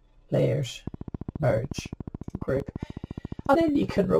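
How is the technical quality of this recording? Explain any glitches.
The recording has clear technical faults. At 0.40 s and 2.60 s there is a dropped buffer (overrun). The sound jumps where about 20 ms is skipped, likely from samples not being read in time. From 0.87 s to 4.12 s a train of clicks ticks regularly, about 14 per second, roughly fifty in all, peaking near 5 dB above the sound. Some pulse source is likely interfering.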